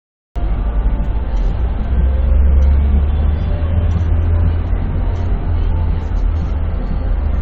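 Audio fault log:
0.00–0.36 s, cut-off start: the clip opens on about a third of a second of digital silence, and at 0.36 s the sound switches on already in progress, with no attack or rise of its own. Capture or streaming began late, so the onset of whatever was sounding was never recorded. A soft fade-in would ramp up gradually, and a dropout would interrupt sound on both sides. Here the sound simply appears at full level with nothing before it.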